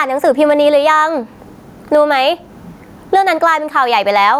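Gain pumping runs through the whole speech recording. The level swings by around 15 dB. The likely cause is input gain set well above what the microphone needs, with a fast limiter or compressor clamping down on every peak and releasing in the gaps. The result sounds squashed, with loud and quiet passages pressed close together in level.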